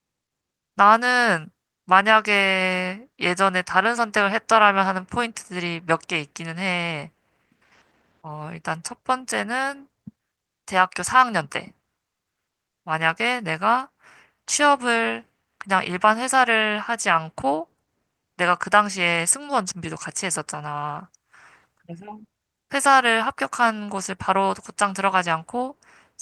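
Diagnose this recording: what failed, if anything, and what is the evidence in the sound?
Nothing in the chain seems to have failed, since the speech comes through without a single dropout, glitch or distortion worth pointing to at any stage.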